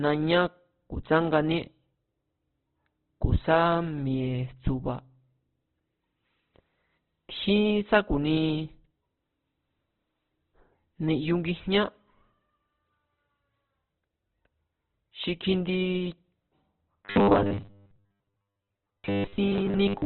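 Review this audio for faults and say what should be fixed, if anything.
The speech throughout is rough and grainy, with nothing above 4.4 kHz. This points to heavy Opus compression, likely at a low bitrate around 12 kbps. Raise the encoder bitrate.

From 17.05 to 20.05 s, the speech becomes a rigid metallic buzz at 100 Hz. This is robotic sound from repeated short buffers, likely 10 ms ones, with most of the audio repeated. Give the playback buffer more headroom so it never runs dry.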